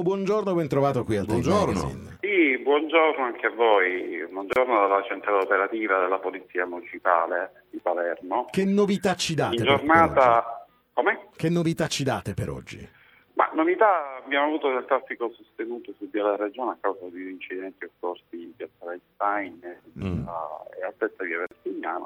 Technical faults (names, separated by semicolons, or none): gap at a join of encoded pieces